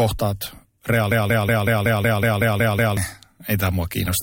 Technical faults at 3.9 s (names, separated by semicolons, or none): none